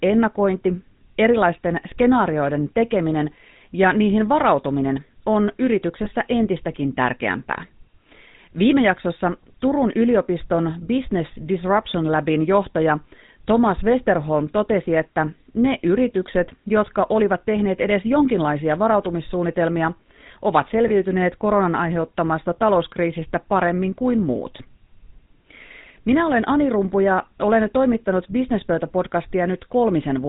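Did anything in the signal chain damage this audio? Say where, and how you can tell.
Yes, at the codec stage. The whole clip has the buzzy, gravelly roughness of the GSM full-rate codec, with nothing above 4 kHz. The vocal tract is modelled and driven by a coarse, regularly spaced pulse excitation, which fits the 13 kbps full-rate codec.

On the network side there are lost GSM frames, heard as brief rough, metallic rings at 6.04–6.08 s, between "ja niihin varautuminen on" and "entistäkin tärkeämpää", and at 20.88–20.91 s, after "edes jonkinlaisia varautumissuunnitelmia ovat". Each fits a single 20 ms frame, concealed by repeating the last good frame.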